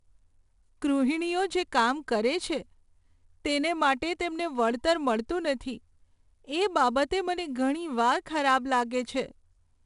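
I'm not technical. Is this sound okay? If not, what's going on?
No. The speech was squeezed with 4-bit ADPCM compression, which stores the sound as rough guesses plus tiny corrections. That leaves a gritty hiss on every louder syllable from start to finish, and nothing above 10.6 kHz, so it also sounds dull.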